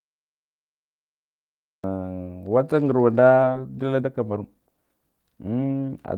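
For the first 1.84 s there is nothing but digital silence, and then the speech starts abruptly in the middle of a sound with no attack or fade-in. This is a cut-off start: the recording or stream began late, so the opening of the utterance was never captured.

At about 3.43 to 3.45 s the speech lurches forward with no audible pause, two separated moments butted almost directly together. This skip ahead dropped about a second of audio that was already queued, so the delay shrank by roughly that amount in a single jump.

From 3.47 s to the end the speech sounds hurried, running at 120% of normal speed while the pitch stays put. This is a jitter buffer speed-up: the receiver trimmed many short pitch-period-sized slices to drain surplus buffered audio, about half a second in total.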